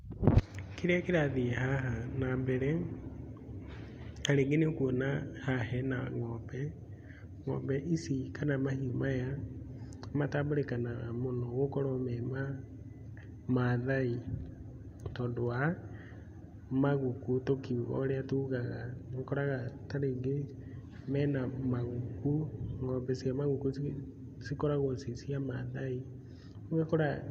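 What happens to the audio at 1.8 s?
Nothing goes wrong at 1.8 s; the speech carries on intact through that moment with no dropout, click or distortion.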